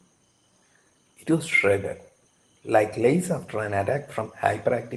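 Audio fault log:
Nothing stood out on listening to this speech, which came through a normal Opus call path whose top end stops at about 12 kHz.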